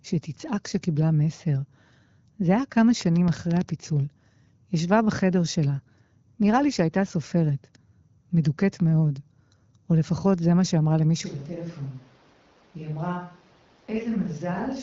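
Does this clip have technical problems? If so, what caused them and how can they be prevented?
Yes, there are two faults.

From 3.01 to 3.70 s a train of clicks cuts across the speech: about ten sharp pops at roughly 11.8 per second, unevenly spaced, peaking about 10 dB above the speech. The likely cause is electrical interference from nearby equipment or a faulty connection or power supply. On a spectrogram they show as thin vertical lines running from the bottom to the top of the frequency range; on a waveform they are narrow spikes standing above the speech envelope. To prevent this, keep phones and power supplies away from the cables and use secure connections and a clean power supply.

At 11.27 s the sound abruptly switches to a distant microphone and stays that way to the end. The close microphone's signal was likely lost, leaving a farther pickup such as a camera microphone. The level drops by about 10 dB, the bass thins, and the sound turns roomy and hollow, with background noise only about 25 dB below the speech. 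On a waveform this is a sudden step down in amplitude. On a spectrogram the low end weakens, reverberant tails smear after each syllable, and the noise floor rises. To prevent this, monitor the close microphone live and record a backup track from a second close microphone.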